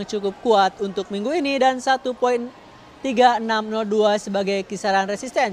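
Nothing is technically wrong with this audio.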